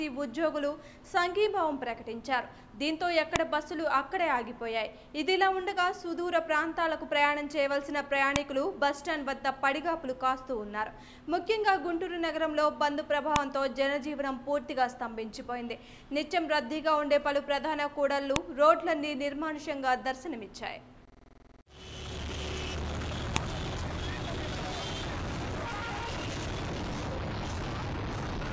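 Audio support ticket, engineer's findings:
Sharp loud click at 3.36, 8.36, 13.36, 18.36 and 23.36 s, a regular 5.0 s spacing that ignores the signal. Symptom of a file header played as audio: joining or streaming stage left each WAV piece's header in place, so those few dozen bytes decode as samples. Waveform shows a brief spike at each point. Spectrogram shows a thin full-band vertical line at each time. Fix: strip headers before concatenation.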